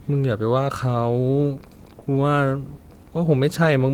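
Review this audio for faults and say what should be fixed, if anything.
At 1.99 to 2.03 s the speech has a short concealed packet loss: about 20 ms of audio never arrived in time, and the receiver filled 19 ms by extending the preceding sound before crossfading back into real audio, leaving a brief smear. On a spectrogram the harmonics or noise run unnaturally flat and then blend back. A larger jitter buffer or forward error correction would prevent it.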